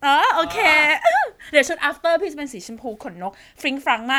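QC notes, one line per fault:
Nothing stood out on listening to the speech in this clip.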